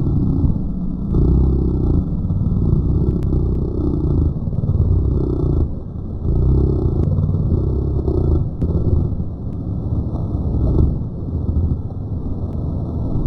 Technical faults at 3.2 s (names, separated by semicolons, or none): compressed frames skipped